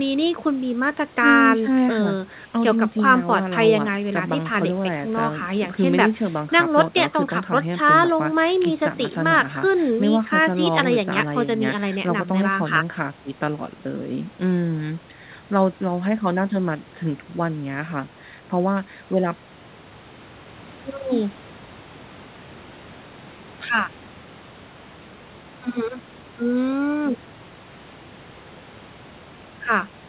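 No technical faults are audible.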